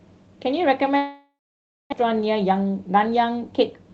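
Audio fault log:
0.97–1.94 s, long network dropout: audio likely stopped arriving for nearly a second. The receiver stretched the last sound into a fading buzz, then left about 0.57 s of near silence, and roughly 0.64 s of the original never returns.
2.02–3.90 s, jitter buffer speed-up: after the gap the buffer held roughly 0.3 s too much audio, so the receiver repeatedly cut short pitch-period slices, about 0.2 s in total. The sound plays at 110% speed with unchanged pitch and comes across as hurried.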